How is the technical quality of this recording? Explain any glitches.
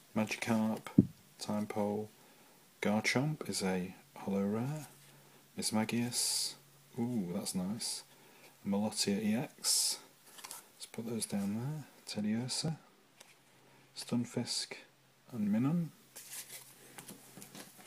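Two problems, both packed into the back half of the clip around the 12 to 15 second mark.

From about 12.1 s to 15.3 s there's de-emphasis applied wrongly. A treble cut that's only supposed to undo pre-emphasis got applied where it shouldn't have been, so the response rolls off smoothly toward the top end. It sits about 8 dB down at 10 kHz relative to 1 kHz. That's enough to make the sound duller and more muffled for those three seconds, and then the brightness comes back.

Early in that stretch, at 12.68 s, there's a tiny jump in the sound. It's most likely a dropped buffer (overrun): the software didn't pull its samples in time, the hardware wrote over them, and the audio on either side got butted together with no gap. Only a millisecond or two goes missing, so you hear a slight skip, not a lost chunk.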